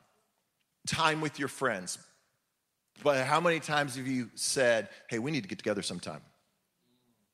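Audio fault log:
Nothing to log here, since no faults turn up anywhere in the speech.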